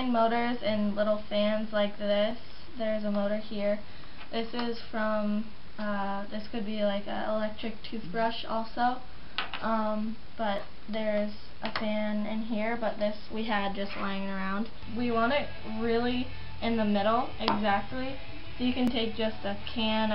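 Two devices likely running on separate clocks that disagree by a few hundred parts per million let the buffer between them drift until it must drop or repeat a block, on the order of 50 samples, each time. These clock drift buffer slips recur every 4.14 s, about five times between 2.31 s and 18.88 s. Each slip breaks the waveform's continuity, heard as a short, regularly spaced click or pop in the sound.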